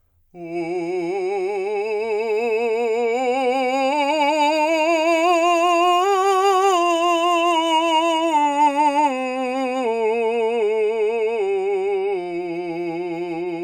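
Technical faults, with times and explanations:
No technical faults are audible anywhere in this music clip.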